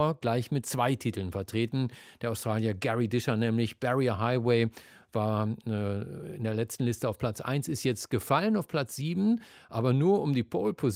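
No technical faults are audible anywhere in this speech recording.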